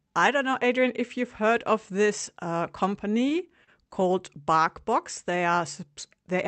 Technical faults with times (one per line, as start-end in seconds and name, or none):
3.11-4.25 repeated stalls (stutter)